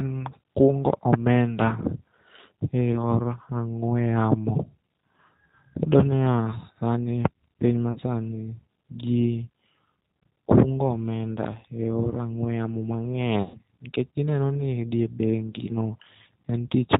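Speech coded with the G.729 codec at 8 kbit/s, with nothing above 4 kHz and a rough, synthetic texture unlike plain band-limiting. VoIP packet loss concealed by the speech codec occurs at 2.92–2.99 s, 7.92–8.0 s and 13.42–13.58 s, covering gaps of about 20, 40 and 120 ms. The gaps are filled with a fading buzzy tone or coloured noise rather than silence, and the speech stays weak briefly after each one.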